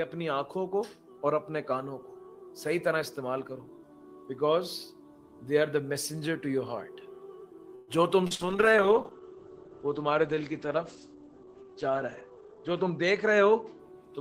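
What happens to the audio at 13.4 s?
A call bitrate drop runs from 8.29 to 13.85 s. The bandwidth estimate fell and the encoder went from 32 to 11 kbps, coding more coarsely and cutting the top of the spectrum from 20 kHz to 8 kHz, so the sound turns rough and muffled.

A jitter buffer speed-up overlaps it from 12.24 to 13.65 s. To shed excess buffered delay, the receiver removed short pitch-period pieces repeatedly, about a tenth of a second in total, so the audio plays at 108% speed with unchanged pitch and sounds hurried.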